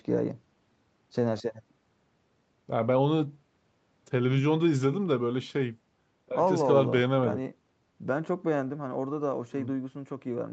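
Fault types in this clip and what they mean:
No technical faults are present: the speech has passed through a call's normal microphone processing, which limits the band to nothing above 8 kHz and trims the lowest bass with its high-pass filter as expected.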